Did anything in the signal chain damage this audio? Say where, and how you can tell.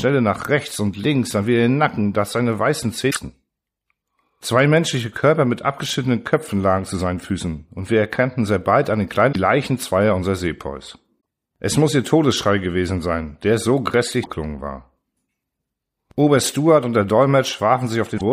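Yes, there's damaged data in the compressed stream, so it's a storage or transfer problem at the codec stage. Short glitches in the speech at 3.07–3.17, 9.29–9.36, 11.17–11.20, 14.20–14.27 and 18.14–18.21 s are where the decoder hit corrupted frames, misread them and lost sync before finding the next header.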